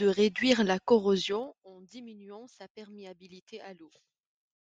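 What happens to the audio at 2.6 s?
Nothing goes wrong at 2.6 s: the speech carries on intact there.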